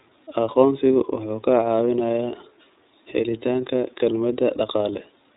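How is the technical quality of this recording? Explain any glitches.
The recording is held back by one continuous fault: the whole clip sounds band-limited, slightly rough and synthetic, with the iLBC codec damage plainly audible. Nothing above 3.8 kHz survives, so sibilants and consonant detail lose their air and the speech takes on a narrow, telephone-like quality. The cause is this narrowband VoIP codec, which encodes each frame's excitation independently of the previous frame. The coarse, slightly grainy texture fits 30 ms frames at about 13.33 kbps.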